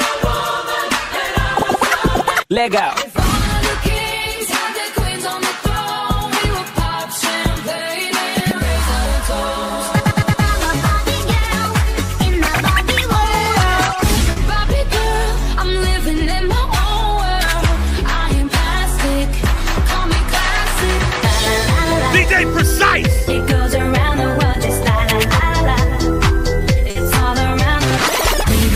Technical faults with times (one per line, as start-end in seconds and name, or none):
14.31-14.37 burst of packet loss
21.83 short concealed packet loss
26.90-26.96 burst of packet loss